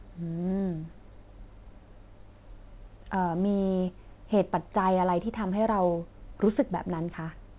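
Listening to this speech recording, nothing stood out as a technical fault, and what comes across is simply the narrow, phone-like sound of a call path that carries nothing above about 4 kHz.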